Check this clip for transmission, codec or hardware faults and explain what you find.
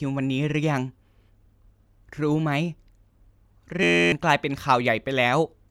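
There's one hardware-side fault. From 3.83 to 4.12 s, a system hang loop replays one 11.6 ms slice of the speech, which fits a 512-sample buffer, giving a flat 86 Hz buzz and dropping roughly a third of a second.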